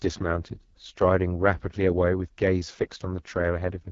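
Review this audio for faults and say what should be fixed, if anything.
Throughout, the speech comes across rough and raspy, with nothing above 7.4 kHz. That's the AMR wideband (HD Voice) codec, and the damage fits its lowest 6.6 kbit/s mode, which is too starved to model the voice cleanly. To avoid it, run the AMR-WB link at 12.65 kbit/s or higher.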